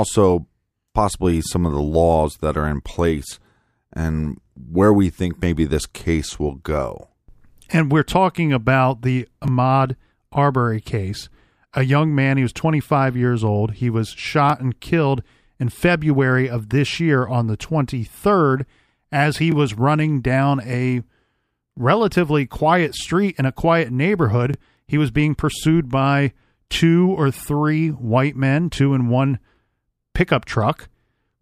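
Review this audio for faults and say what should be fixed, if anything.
Overlapping chunks occur at 4.46, 9.48, 14.50, 19.52, 24.54 and 29.56 s, once every 5.0 s: after "are in place and", after "we're talking about the", and between "as he" and "was running down a". Each new 5-second block of this speech begins 20 ms before the previous one ended, so that 20 ms plays twice at every join, heard as a brief click or stutter recurring on a steady beat. To fix it, make each chunk start exactly where the previous one finished, or crossfade and trim the overlap instead of playing both copies.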